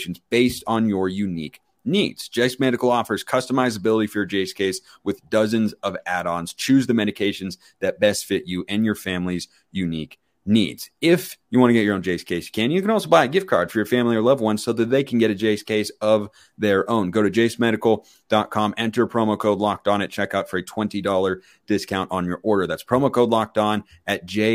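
No audible technical faults anywhere in the speech recording; nothing to flag.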